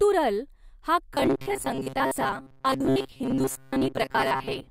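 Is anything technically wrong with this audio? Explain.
Yes. From 1.15 s to the end, the speech turns into robotic sound from repeated short buffers. Audio likely arrives too seldom, so roughly 7.5 ms chunks repeat for most of the stretch. This imposes a rigid, metallic 133 Hz buzz that still loosely tracks the speech.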